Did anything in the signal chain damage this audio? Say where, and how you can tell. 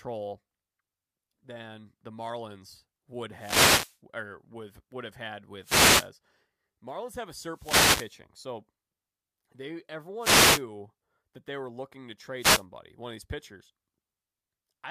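Yes. The analogue wireless microphone's radio link, ahead of the converter, suffers wireless microphone noise hits: brief swishes of static at 3.32–3.98, 5.61–6.10, 7.50–8.17, 10.19–10.63 and 12.37–12.65 s. Reflected signals cancel the carrier, so receiver noise rises.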